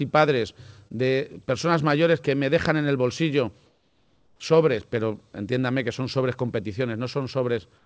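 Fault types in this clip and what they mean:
Short concealed packet loss, 0.88 to 0.92 s: about 20 ms of audio failed to reach the decoder in time, so the receiver bridged the hole by extending the preceding sound for roughly 21 ms before blending back into the real signal. It is heard as a brief smear or wobble.
Comfort noise in place of the background, 3.66 to 4.40 s and 7.78 s to the end: in these pauses the detailed background gives way to a steady, featureless noise about 5 dB quieter. This is likely synthetic noise the receiver generated while the sender's discontinuous transmission paused sending.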